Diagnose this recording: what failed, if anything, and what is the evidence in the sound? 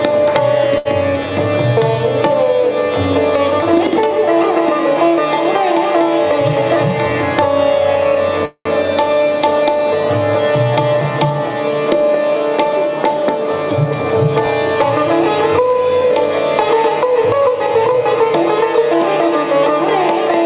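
A short stall from a late packet runs from 0.78 to 0.87 s, at the network and jitter-buffer stage. The sound is held about 72 ms too long with a faint buzz or dip, then resumes from the same point with nothing lost, so the receiver stretched audio while waiting.

A call audio freeze runs from 8.45 to 8.67 s. The sound turns to a fading buzz or hiss, then about 80 ms of silence, 202 ms in all, and resumes unbroken. The likely cause is packets held up on the network, draining the jitter buffer. The call codec's band limit at 4 kHz stays constant across both events.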